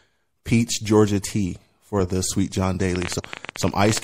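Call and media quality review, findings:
MP3 compression throughout: watery, swirly highs, cut treble, smeared s sounds. Likely a low-bitrate encode, consistent with about 64 kbps, dropping weak frequency lines frame to frame.

Train of clicks, 2.96 to 3.98 s: around twenty uneven ticks, about 15 a second, roughly 10 dB over the speech. Likely interference or a struggling interface injecting pulses.

Damaged data in a compressed stream, 3.16 to 3.20 s: short glitch. Corrupted frames, decoder losing sync and hunting for the next header.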